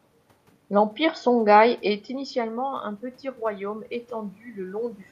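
From 1.83 s to the end at 5.11 s, automatic gain rising is audible: after the input level falls by about 14 dB, around 2 s where the talker moves away, the gain control gradually lifts its gain, so voice and room noise swell together.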